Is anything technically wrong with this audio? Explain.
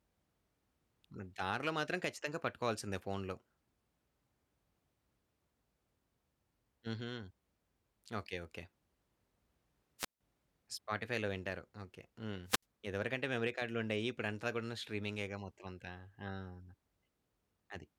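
Yes. Wireless microphone squelch dropouts occur at 9.98 to 10.21 s and 12.45 to 12.63 s. The FM radio link fades, hiss rises briefly, then the receiver's squelch mutes the output, leaving near-silent holes of about 160 ms and 70 ms before the speech resumes.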